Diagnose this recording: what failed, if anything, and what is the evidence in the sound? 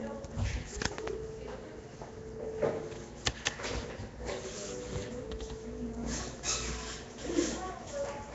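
The codec stage is the likely culprit: the audio appears to have passed through Nellymoser compression, the old Flash microphone codec, at a setting consistent with a 32 kbps stream. The damage is plainly audible throughout: nothing reaches above about 7.7 kHz, and the sound carries a rough, hissy fringe with a smeared, underwater character. That comes from coarse block coding, where weak bands get no bits and are refilled with noise instead of the original detail.

The same transform coding also produces a pre-echo at 3.45 s, a brief hiss of about 14 ms just ahead of a sharp attack. The codec spreads its quantisation error across the whole block, so noise sized for the loud onset also lands in the quiet instant before it. The attack therefore arrives already blurred, with its leading edge softened rather than crisp.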